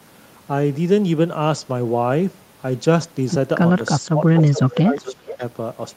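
From 4.0 to 4.23 s the speech level dips sharply, by about 30 dB at its deepest, with roughly a sixth of a second affected. This is speech suppressed in double talk, likely caused by an echo canceller that could not separate the near talker from loudspeaker echo while both sides spoke, so it turned everything down. From 4.36 to 4.79 s an echo leak appears: a delayed copy of the speech, trailing by 422 ms and sitting about 15 dB below it. It comes across as a faint repeat. The likely cause is a loudspeaker endpoint whose canceller left residual pickup in the return path. From 4.51 to 5.42 s the suppression returns, shallower at about 15 dB deepest, but spread over roughly a second. The echo leak recurs from 4.97 to 5.44 s with the same 422 ms delay and about the same level, overlapping the suppressed stretch.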